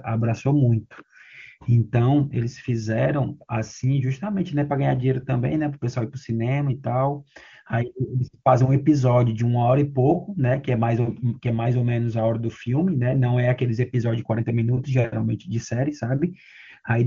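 Nothing stood out on listening to this speech, which comes through an AMR wideband (HD Voice) link at its top rate of 23.85 kbit/s.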